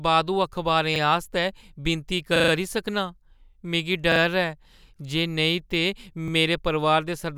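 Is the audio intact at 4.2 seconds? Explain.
No. A repeated buffer fault runs from 4.12 to 4.2 s, ending right at the moment asked about. New audio failed to reach the playback device in time, so it replayed the last block it held instead of waiting. The same 40 ms piece, which fits a 40 ms buffer, sounds three times in a row with a hard join at each repeat, a short stutter in the speech. Little or no audio is lost.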